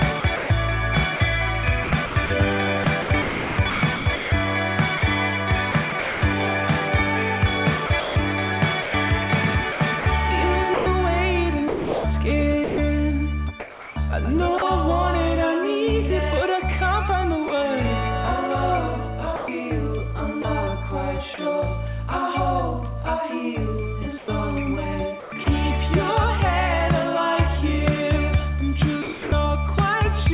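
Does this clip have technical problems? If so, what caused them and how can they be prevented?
Yes. Sound chopped by the voice detector runs from 0.2 to 6.22 s, 7.86 to 14.62 s, 19.36 to 21.38 s and 24.18 to 25.46 s. The sender's voice detector likely kept toggling transmission, so about 1.6 s, 1.5 s, 0.18 s and 0.24 s of sound became comfort noise. Lowering the detector's threshold or lengthening its hangover time would prevent this.

Sound dropped by the voice detector occurs at 17.48 s (20 ms) and from 29.02 to 29.32 s. The detector likely mistook quiet sound for background and stopped sending, so steady comfort noise fills the gap until it triggers again. Disabling discontinuous transmission or tuning its sensitivity would prevent these dropouts.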